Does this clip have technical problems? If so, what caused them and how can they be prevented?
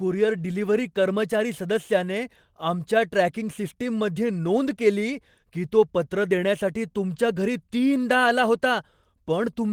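No, this clip has no technical problems, so there is nothing to prevent.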